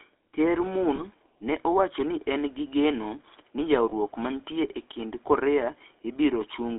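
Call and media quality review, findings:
Buzzy, gravelly roughness on the speech for the whole clip, band limited to about 300 Hz to 3.6 kHz with nothing above. Component: GSM full-rate codec, the sound fits 13 kbps full rate. Mechanism: vocal-tract model driven by a regularly spaced, decimated pulse excitation, leaving a coarse, grainy texture that is plainly audible.

Brief rough, metallic ring at 0.96 to 1.02 s, just before "ne owacho ni en", and at 3.90 to 3.93 s, between "en gi geno ni" and "mantie e kind". Component: lost GSM frames, each consistent with a single dropped 20 ms frame. Mechanism: the decoder repeats the last good frame's parameters, so the preceding sound rings briefly instead of breaking to silence.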